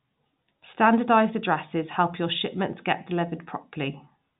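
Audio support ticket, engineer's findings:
Nothing to flag on this one: the speech sits in a normal G.711 telephone channel, with the band topping out around 3.8 kHz as expected for that path, and no faults turned up.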